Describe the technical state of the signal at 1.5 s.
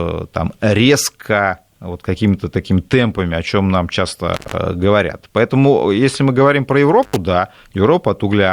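The speech signal at 1.5 s is intact, with no audible fault at that moment.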